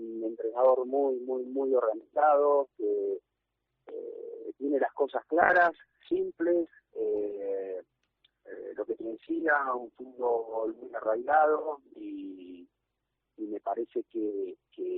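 From 5.43 s to the end, the sound turns rough and watery, losing its top end so it comes across as muffled, and it never recovers. This is a call bitrate drop. The connection's bandwidth estimate fell, and the encoder was forced to spend far fewer bits, quantising coarsely and trimming high frequencies. The degradation points to a fall from around 96 kbps to roughly 17 kbps, with the worst stretch lasting about 6 s.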